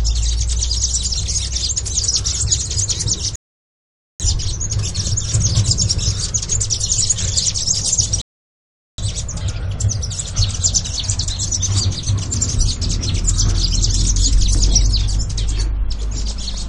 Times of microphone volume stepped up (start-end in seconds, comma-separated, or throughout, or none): none